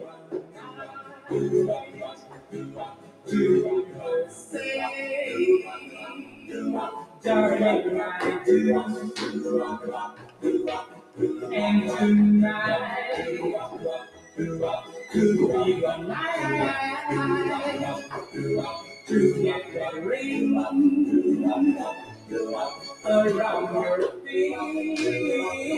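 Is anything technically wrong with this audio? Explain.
Yes. A noise suppressor applied to music or sounds runs throughout, treating sustained material as noise and swinging gain by about 15 dB, so held sound pumps and thins. Sound cut by the noise suppressor is clearest at 0.0–3.31 s, 3.85–4.55 s, 5.62–7.26 s, 9.78–11.49 s, 13.68–15.14 s, 18.02–19.1 s, 21.93–23.06 s and 24.11–24.31 s. In these stretches, steady passages and decays sink by about 11–13 dB (about 8 dB in the last) while attacks survive.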